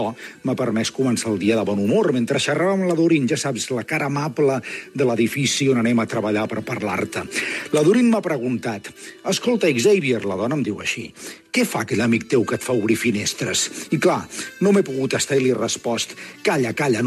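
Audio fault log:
No fault is heard in this audio.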